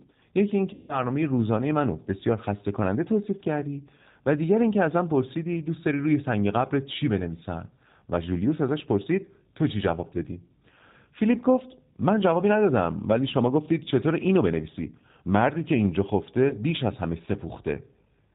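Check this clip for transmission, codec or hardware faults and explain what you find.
Two faults are present: G.729 codec coloration across the whole speech clip, and three spots of VoIP packet loss concealed by the speech codec.

G.729 codec, throughout: the speech is rebuilt from a vocal tract filter, a pitch predictor and a few pulses per frame, which fits an 8 kbit/s G.729A stream. Nothing above 4 kHz survives, and the voice sounds plainly rough and synthetic. Unlike generic low-pass filtering, the damage is this model-based buzziness rather than simple dullness.

VoIP packet loss concealed by the speech codec, at 0.73 to 1.00 s, 13.84 to 13.88 s and 16.49 to 16.55 s: the decoder carried its last pitch and filter forward while lowering the gain. The first gap is about 160 ms and the others about 20 ms each, fitting one to eight lost 20 ms packets. The sound smears into a fading buzzy tone or coloured noise, then stays weak briefly after recovery. 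This is not a dropout to silence or a hard click.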